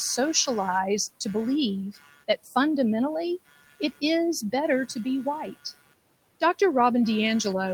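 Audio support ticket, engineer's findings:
Ground coupling from computer load changes: buzzing at roughly 150 pulses per second throughout, around 20 dB under the speech, tracking machine activity rather than the sound; the room noise, about 21 dB below the speech, is a separate background.

Noise suppressor misclassifying speech as noise: speech swallowed at 1.92–2.56 s (dips of about 16 dB), 3.46–4.02 s just before "is better to be" (about 19 dB), and 5.52–5.94 s just after "is better to be" (about 20 dB).

Lost packet rebuilt from error correction, 6.71–6.81 s: decoder played low-bitrate in-band copies, about 60 ms in total, consistent with a few separate lost packets. No gap, but the audio turns briefly rougher and noisier.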